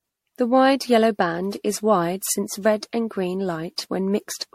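Throughout the speech the sound is swirly, smeared and hollow, with blurred consonant attacks and nothing above 16.2 kHz. This is generation loss, likely from the audio passing through an MP3 encoder around ten times at something near 64 kbit/s. Each re-encode quantises on a shifted frame grid, so holes and noise pile up. A single encode at that rate would sound cleaner. Here the smearing is heavier than the bandwidth implies.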